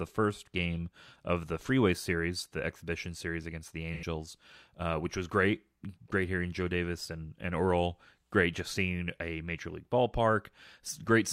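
From 3.93 to 4.04 s, AAC frame loss with concealment leaves a smeared, phasey patch. It's rebuilt from the previous spectrum, unlike a clean dropout's silence.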